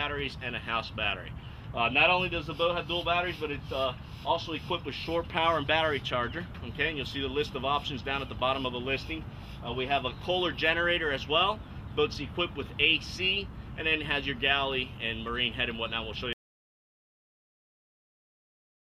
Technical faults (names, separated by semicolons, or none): audio dropout to silence